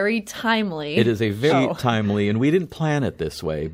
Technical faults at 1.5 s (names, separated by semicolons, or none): compressed frames skipped